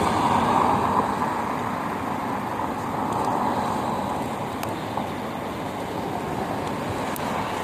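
From start to finish, an unreliable data bit puts a steady crackle or fizz over the sound. One marginal data line flips its bit in a random share of samples, so every error is a spike of identical size. Unlike clipping, it doesn't follow loudness: it carries straight through quiet pauses.

Also present throughout is a rough, grainy texture with noise filling the gaps between tonal components and nothing above 15.6 kHz. This is likely low-delay AAC compression (AAC-ELD) at a rate that fits about 32 kbps. Its short frames resolve harmonics poorly, giving smeared, synthetic grain rather than random spikes.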